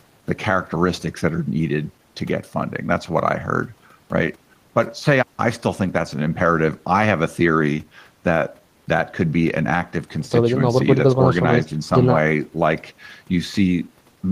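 Nothing stood out as a technical fault on listening to this speech recording.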